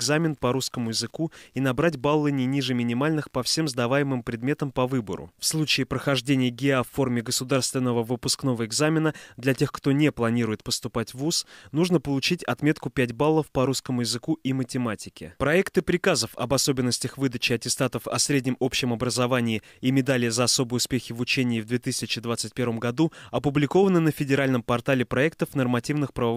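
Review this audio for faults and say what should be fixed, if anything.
Nothing in the audio calls for a fix. No fault can be heard at any point, so no change to the capture or processing is needed.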